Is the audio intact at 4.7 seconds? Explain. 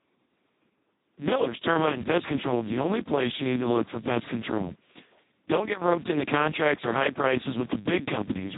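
No, Speex codec damage runs through the whole clip, including 4.7 s: the CELP coder is starved of excitation bits, so the speech sounds hoarse and robotic, fitting a very low bitrate near 2 kbps. A spectrogram shows nothing above 3.8 kHz.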